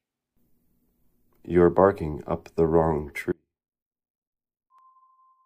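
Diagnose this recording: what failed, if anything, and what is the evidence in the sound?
An audio dropout to a faint residue at 3.32 s runs to the end: the sound cuts abruptly to a trace about 35 dB down, likely an analogue wiring break upstream while the downstream path stayed live. The waveform collapses to a thin band, and the spectrogram goes nearly dark.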